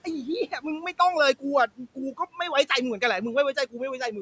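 Noise suppressor artifacts run through the whole clip. The suppressor pulls the room noise down by about 18 dB between phrases, so the background pumps. Between 1.67 and 2.19 s, the noise suppressor cut speech: it mistook quiet speech for noise and dropped it by up to about 15 dB, leaving roughly 150 ms of sound swallowed and faint.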